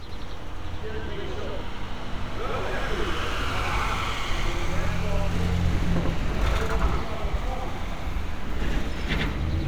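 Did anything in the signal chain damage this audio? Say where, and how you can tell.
Yes, there's a channel delay (doubling) at the driver or buffer stage. Every event throughout the clip repeats as an equal-level slap about 93 ms later, which fits one channel sitting a 4096-sample buffer behind the other before both got folded to mono.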